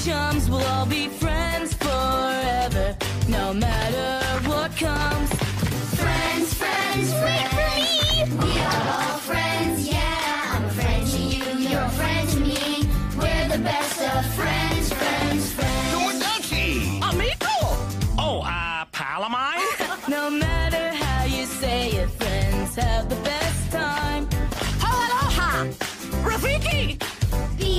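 No technical faults can be heard anywhere in the recording; the signal stays steady and intact throughout.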